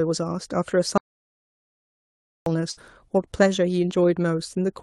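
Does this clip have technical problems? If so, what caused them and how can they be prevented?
Yes, there are two. First, an audio dropout to silence from 0.98 s to 2.46 s: the speech just stops dead and about 1.5 s goes to silence, with no room tone at all, then picks up mid-flow. That total blackness suggests the input was lost while the recorder kept writing silence, likely a mic or interface that briefly disconnected or got muted. Whatever was said in that stretch is simply gone. To prevent it, secure the cabling and device connection, and watch the input meter while recording so a dead input gets noticed right away.

Second, a burst of packet loss at 2.71 s to 2.79 s. A little after the speech comes back, the call's receiver hit a gap and smeared the last sound forward for about 54 ms, fading it out as a short buzz or hiss, before jumping ahead. Roughly 60 ms of the actual audio never arrives. 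This comes from the network side, where packets were dropped or arrived too late to play, not from the recording itself. To prevent it, put the call on a steadier connection, preferably wired rather than congested Wi-Fi, and enable the codec's loss protection.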